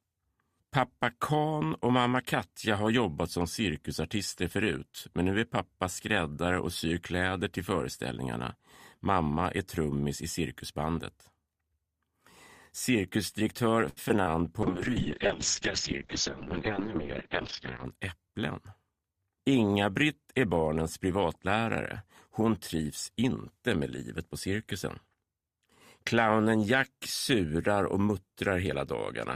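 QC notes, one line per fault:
13.89 to 13.99 s, short stall from a late packet: a packet came in behind schedule, the jitter buffer ran dry, and the receiver held the last sound for about 71 ms until the packet arrived, then resumed exactly where it stopped. Nothing is lost, so the sound is a drawn-out moment with a faint buzz or dip and not a gap. That sets it apart from packet loss, which drops material, and it adds 71 ms of delay from here on.
14.09 to 14.22 s and 14.24 to 14.28 s, short concealed packet loss: twice about 20 ms of audio never reached the decoder, and the receiver invented a bridge from the preceding sound before easing back into the real signal. Each is a brief smear or wobble where material is missing. Unlike the stall just before, the underlying audio does not resume intact, and the first bridge leaves the timeline roughly 20 ms longer.
14.64 to 17.91 s, call bitrate drop: the bandwidth estimate fell and the encoder went from 64 kbps to 6 kbps, sitting at the bottom for about 3.2 s. 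At that rate Opus narrows the audio band from 20 kHz to 6 kHz and codes coarsely, so the sound goes muffled and watery for the whole stretch. It lasts seconds and changes tone, where the concealment events are momentary glitches.
17.96 to 18.51 s, jitter buffer speed-up: with surplus audio queued, the receiver trimmed small pitch-period slices repeatedly to shed about 50 ms of delay. Playback runs at about 108% speed with pitch unchanged, so the sound feels slightly hurried. That distinguishes it from a resampling error, which would shift pitch too, and from loss concealment, which smears rather than rushes.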